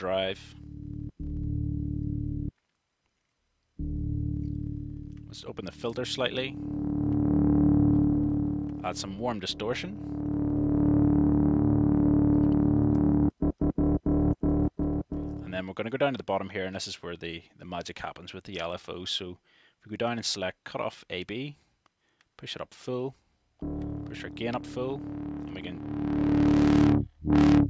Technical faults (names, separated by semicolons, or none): none